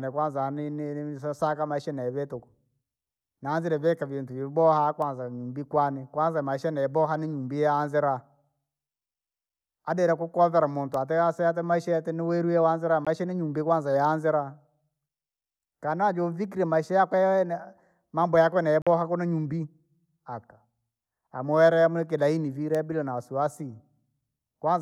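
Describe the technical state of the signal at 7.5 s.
At 7.5 s the signal is intact, with no audible fault in the speech at that point.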